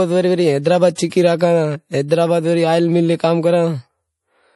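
From start to finish, the speech has nothing above about 11.5 kHz, and the loss is fixed rather than shifting with the signal. This is most likely low-bitrate audio saved at a high bitrate: an MP3 made at a low rate, roughly 48 kbit/s, then re-encoded as a much larger MP3. The second pass cannot restore the missing top end. Unlike a simple low-pass filter, the first encoding's MP3 artefacts remain.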